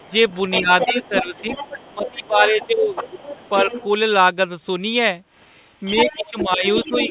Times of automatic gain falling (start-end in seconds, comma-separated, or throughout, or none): none